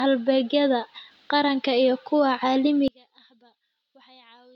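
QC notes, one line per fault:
2.88–4.55 s, one channel inverted: from just after "qaranka iyo kuwa" to the end, one stereo channel has likely been flipped in polarity. When the two channels are summed to mono, the speech they share cancels. The level drops by about 31 dB, and the centred speech all but disappears. Only the small difference between the channels remains, a faint residue in place of a full voice.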